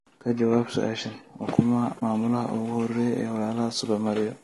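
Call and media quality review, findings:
Low-delay AAC compression, throughout: speech rough and grainy, noise filling gaps between harmonics, top band thin and synthetic. Likely AAC-ELD; short frames resolve pitch harmonics poorly, and damage this plain points to a low bitrate, around 32 kbps.

AAC frame loss with muting, 1.99–2.02 s: soft-edged dropout of about 20 ms. One lost frame, spectrum zeroed by the decoder; overlapping windows fade the signal out and back in across the gap.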